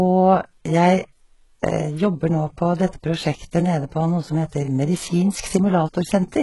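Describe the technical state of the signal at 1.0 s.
At 1.0 s the speech has a bright but synthetic top end: s sounds come out gritty and lispy, with a metallic sheen, and nothing is heard above 11.5 kHz. This runs through the whole clip. The likely cause is HE-AAC compression, heavily damaging here and consistent with a very low bitrate around 12 kbps. Only the lower spectrum is coded, and the treble is rebuilt by copying lower bands upward, so its harmonics don't line up with the real ones.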